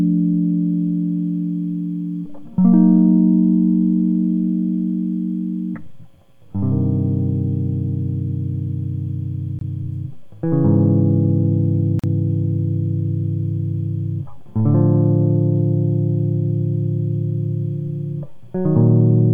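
Music, with two brief dropouts that are gaps at joins of encoded pieces: silence from 9.59 to 9.61 s (22 ms) and from 11.99 to 12.04 s (42 ms). Separately encoded segments were spliced without trimming the encoder's start delay and final-frame padding, so the sound stops abruptly and resumes where it left off. On a waveform each shows as a flat near-silent stretch; on a spectrogram, a thin vertical empty column with slightly smeared edges.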